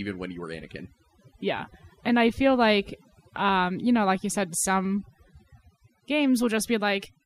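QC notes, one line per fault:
Throughout, overdone noise removal: the suppressor cuts bands near its noise estimate too hard. Background drops and breaks up into twinkling specks.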